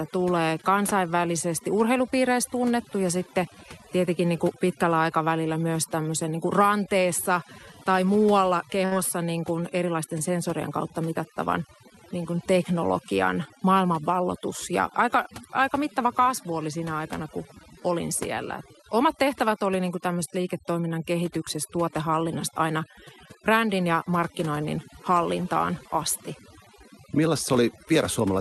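A speech clip in which the background drops and breaks up into twinkling specks. This is overdone noise removal, where an over-strong noise reducer shuts down frequency bands near its noise estimate and takes quiet voice detail with them. From 8.85 to 8.93 s, between "kuin ranteessa tai muualla" and "niin kuin erilaisten sensorien", the sound stretches into a briefly held, fading tone and then jumps ahead. This is a burst of packet loss, with about 58 ms concealed by extending the last sound and about 60 ms of audio missing. The audio passed through an Opus call path with its top end limited to 12 kHz.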